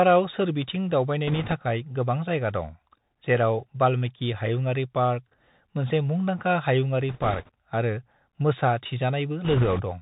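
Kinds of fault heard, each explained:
Bluetooth CVSD headset codec: a one-bit adaptive delta coder, which fits 64 kbps CVSD, removes everything above 4 kHz, leaving scratchy s sounds over a granular hiss.
Bit errors on a Bluetooth voice link: a few percent of the link's bits flip, adding rushing crackle without loud clicks at 1.28–1.54, 7.09–7.49 and 9.44–9.82 s.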